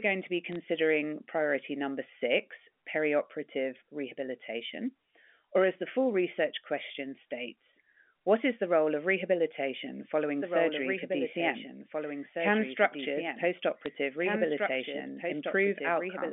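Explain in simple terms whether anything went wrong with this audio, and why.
Two things went wrong. First, bit errors on the digital phone line: a few bits were flipped in transit, each corrupting a single sample. Just after "to be", from 0.52 to 0.56 s, and again at 13.86 s, these produce brief sharp ticks or crackle.

Second, a doubled audio track starts at 10.42 s, right after "role of rehabilitation following", and continues to the end. The likely cause is that the sound was captured twice, once through a slower path. A second, somewhat quieter copy trails about two seconds behind the original, so the speech overlaps itself.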